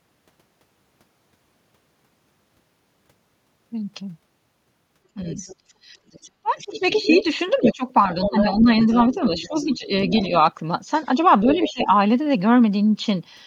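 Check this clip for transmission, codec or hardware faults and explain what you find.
Two faults related to echo cancellation are audible, both tied to moments when a second talker overlaps the main one.

Speech suppressed in double talk: at 5.14–5.19, 6.42–8.69, 9.34–9.91 and 11.42–11.88 s the main voice ducks by about 15 dB, in brief dips and chopped-out pieces. The likely cause is an echo canceller that couldn't separate local speech from loudspeaker echo and attenuated both.

Other side's voice leaking through: a second voice sits under the main one, faintly at 5.3–5.55 s and louder, about 10 dB down, across 6.08–10.27 and 11.47–11.87 s. This is likely loudspeaker playback that the echo canceller didn't fully remove from the microphone.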